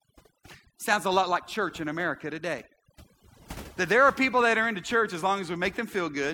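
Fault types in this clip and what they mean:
overdone noise removal: noise reduction set too strong pulls frequency bands near the noise estimate far down, so the background breaks into twinkling, warbling specks throughout the speech.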